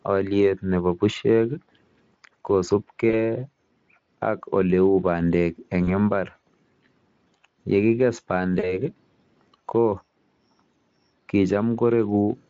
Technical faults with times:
3.09-3.15 VoIP packet loss concealed by the speech codec
5.83-5.93 VoIP packet loss concealed by the speech codec
8.59-8.82 VoIP packet loss concealed by the speech codec

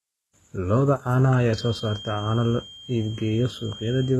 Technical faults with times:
0.00-4.19 HE-AAC compression
1.47-4.19 feedback whistle

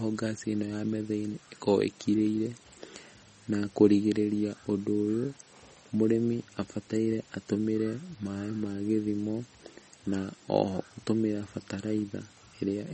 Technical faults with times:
0.00-12.93 MP3 compression

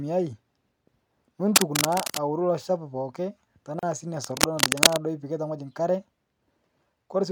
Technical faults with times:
1.56-2.18 cable scratch noise
3.79-3.83 gap at a join of encoded pieces
4.23-4.98 cable scratch noise

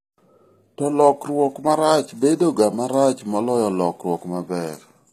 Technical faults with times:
0.00-5.13 HE-AAC compression

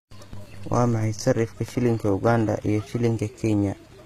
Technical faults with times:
0.00-4.05 HE-AAC compression

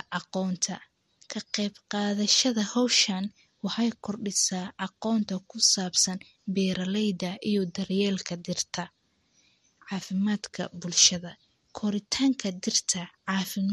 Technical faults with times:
0.00-13.72 MP3 compression

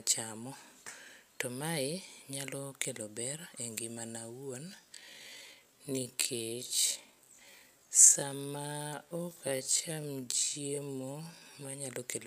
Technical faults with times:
4.65-11.75 time-stretched section

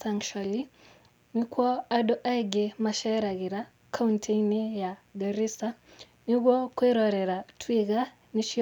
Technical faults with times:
0.00-8.62 mains buzz

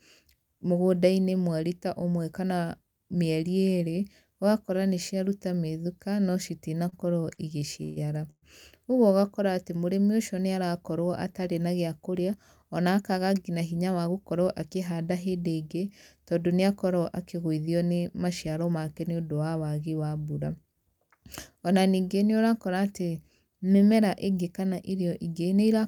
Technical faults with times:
6.89-6.94 short stall from a late packet
7.34-7.39 short stall from a late packet
7.83-7.98 call audio freeze
8.30-8.44 call audio freeze
12.13-14.63 jitter buffer speed-up
18.46-18.71 jitter buffer speed-up

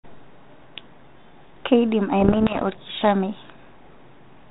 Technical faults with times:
2.20-2.67 bit errors on an ADPCM link

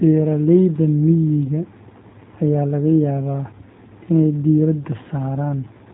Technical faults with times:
0.00-5.93 G.729 codec

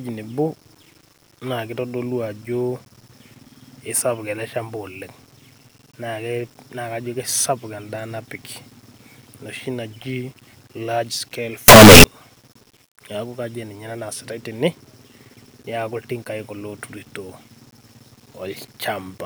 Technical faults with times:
11.68-12.04 signed and unsigned mixed up

